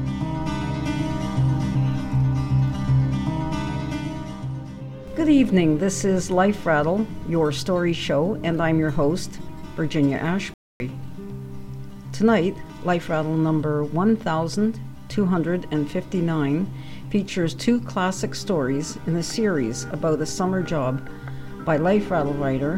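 At 10.54 s there's a playback stall: the sound cuts out for about 0.26 s, until 10.8 s, likely because the player briefly ran dry of data.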